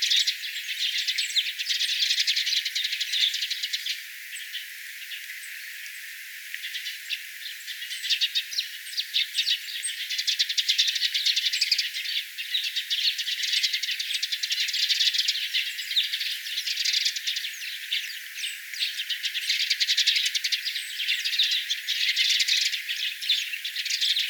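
No technical faults can be heard anywhere in this audio.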